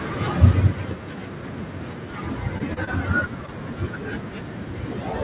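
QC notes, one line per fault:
0.05 to 1.06 s, automatic gain falling: the automatic gain control decides the input is too loud or too noisy for its starting gain and eases its gain down by about 5 dB over roughly a second, so the voice and the room behind it sink together rather than the voice alone getting quieter.
2.58, 2.74 to 2.78, 2.84 to 2.89 and 3.46 to 3.50 s, short concealed packet loss: four 20 ms chunks of the call arrived too late, and the receiver papered over each by stretching the last bit of sound for 15 to 28 ms before blending back, giving brief smears or wobbles, three bunched together around 2.6 to 2.9 s.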